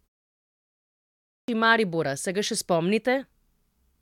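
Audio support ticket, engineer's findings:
Clipped start after a pause, 0.88 s to 1.48 s. Speech resumes abruptly after the 0.88 s of silence at clip start, with about 0.60 s of onset missing. The first sounds are swallowed. Probable component: output device or its power-saving path. Mechanism: the device drops into sleep during the silence and needs roughly 600 ms to wake and relock, so playback resumes mid-utterance.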